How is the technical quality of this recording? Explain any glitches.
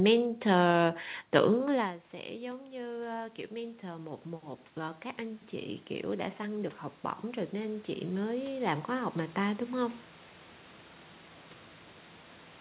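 The main glitch is automatic gain rising, twice. Once the talker moves away around 1.5 s, the level drops by about 18 dB, and from 1.59 to 6.82 s the gain control slowly climbs back by about 8 dB. From 7.33 to 10.03 s it rises another 6 dB or so. The control reads the input as too quiet and turns itself up gradually, so the voice and the room noise swell together. All of this comes through the narrowband sound, with nothing above 4 kHz, which fits a telephone-grade codec.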